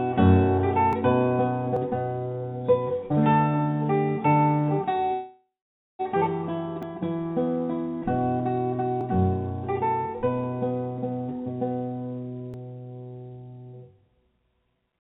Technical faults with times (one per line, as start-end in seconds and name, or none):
0.93 dropped buffer (overrun)
1.76 dropped buffer (overrun)
5.13-6.01 call audio freeze
6.83 dropped buffer (overrun)
9.01 dropped buffer (overrun)
12.54 dropped buffer (overrun)